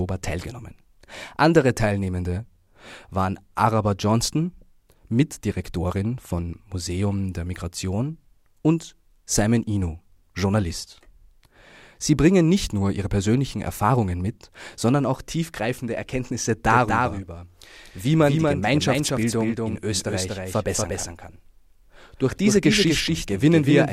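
Speech that turns into a double-tracked echo at 16.70 s and stays that way to the end: every syllable is followed, roughly a fifth of a second later, by a second full-band copy about 5 dB quieter. The copy switches in abruptly and carries no decay or room colour. This is a doubled audio track, most likely the same signal mixed in again through a slower second capture path, or an edit that left two copies out of step.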